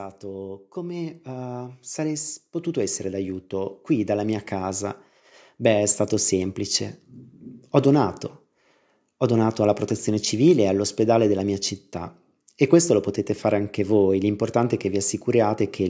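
From 0.2 to 5.08 s, automatic gain rising lifts voice and background noise together by about 10 dB, unlike a talker moving closer, which raises only the voice.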